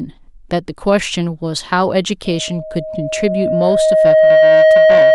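From 2.25 s to the end of the speech, a loudspeaker feedback squeal takes hold. The microphone is picking up the loudspeaker it drives, and near 628 Hz the loop gain has crept past one, so that frequency feeds on itself. It swells over roughly two seconds into a steady, piercing tone that ends about 10 dB above the speech. On a spectrogram it forms a bright horizontal line at 628 Hz; the waveform's envelope grows steadily and stays fat to the end.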